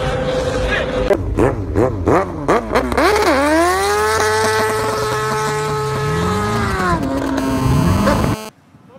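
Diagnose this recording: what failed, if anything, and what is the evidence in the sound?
A galloping run of short raspy buzzes from 6.56 to 7.28 s, roughly 10 dB below the programme, is GSM signalling bursts, a fault in the analogue wiring stage. The buzz fragments are pitched at 217 Hz, the TDMA frame rate of a 2G handset. A nearby phone sending short groups of radio bursts during signalling induced RF in an unshielded or poorly filtered input, and a semiconductor junction rectified it into audible clicks.

From 7.38 to 8.49 s a hard, continuous, harmonic-rich buzz at 217 Hz sits about 11 dB below the signal and bears no relation to the audio. This is GSM phone buzz, again entering in the analogue wiring. The steadiness fits a handset in an active call transmitting 217 bursts every second. Some stage of the audio circuit demodulates those RF pulses into their envelope, producing the square-edged tone.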